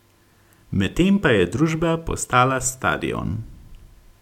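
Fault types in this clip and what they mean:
No faults are audible anywhere in this speech clip.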